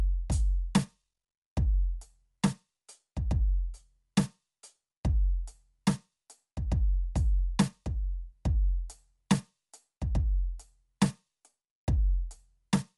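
From start to finish the music has a grainy, breathy sheen on its upper range, and nothing is heard above about 11.5 kHz. The likely cause is Bluetooth LC3 compression: the LE Audio transform codec discards much of the high spectrum and fills the gaps with synthetic noise, which gives this hiss-like texture. The damage is plainly audible, which fits a bitrate around 48 kbps with 10 ms frames.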